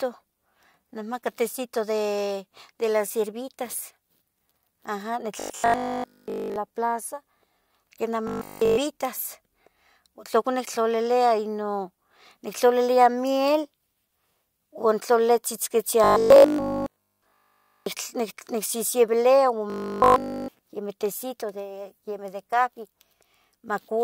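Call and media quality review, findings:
Robotic sound from repeated short buffers at 5.40–6.56 s (ending before "la plaza"), 8.27–8.77 s, 16.04–17.86 s and 19.70–20.48 s. Rigid 50 Hz metallic buzz. Likely a jitter-buffer underrun repeating a 20 ms block throughout each span.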